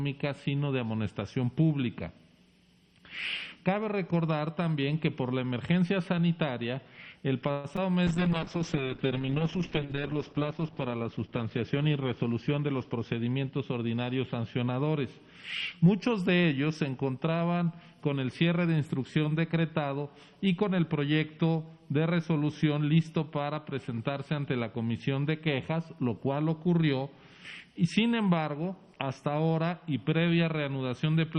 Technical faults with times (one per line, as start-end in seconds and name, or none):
7.51-7.66 call audio freeze
7.76-7.79 short concealed packet loss
8.07-14.73 call bitrate drop
12.16-13.31 jitter buffer speed-up